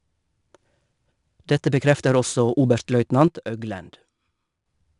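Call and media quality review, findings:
4-bit ADPCM compression, whole clip. Gritty hiss riding on louder speech, following its level. Attacks sound rough where the step size lags. No content above 10.6 kHz. Audible damage, consistent with an 89 kbps ADPCM stream.

Sudden gain jump, 3.28 s to 4.66 s. Speech and background noise drop together by about 8 dB, then return. Level changes between adjacent samples, no ramp. Likely a gain setting or bit shift applied abruptly in the digital path.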